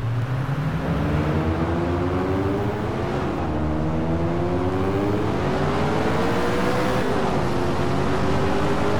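No faults are audible anywhere in the clip.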